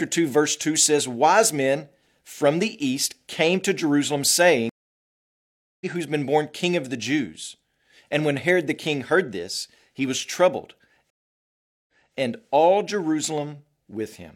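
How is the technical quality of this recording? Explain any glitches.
The speech is interrupted twice by dropouts. A stream reconnect at 4.69 to 5.86 s leaves about 1.1 s of silence, and the speech resumes roughly 1.5 s further along with "who's been born king". A second reconnect at 11.10 to 12.16 s cuts in after "this he was troubled". After 0.78 s of silence, the audio resumes 0.28 s earlier, repeating material before "and all". Each time, the connection dropped and the player restarted its decoder mid-stream, so playback picks up at a different point.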